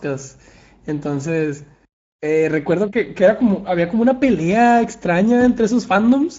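From start to finish, the speech carries Speex codec damage, and it is plainly audible. Speex is a CELP coder. It rebuilds speech from a predicted envelope plus a coarse excitation signal. Here the excitation is short of bits, so the speech sounds noisy and hoarse. The character points to a middling setting of about 17 kbps. Nothing reaches above 7.7 kHz, so the top of the band is cut off.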